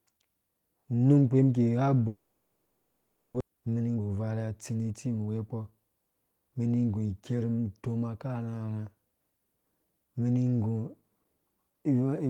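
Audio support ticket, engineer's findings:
Long network dropout, 2.07 to 3.42 s. Sound stalls and the receiver fills the whole 1.33 s gap with a fading buzz/hiss continuation of the last sound. No true silence. About 1 s of real audio never comes back. Likely cause: packets lost on the network path, with delay jumping by about a third of a second.

Jitter buffer speed-up, 3.50 to 5.35 s, right after. Playback runs at 114% with pitch unchanged, so it sounds rushed. The buffer was overfull after the late packets landed together, so the receiver kept snipping pitch-period-sized chunks, roughly 300 ms in total, to catch back up to target delay.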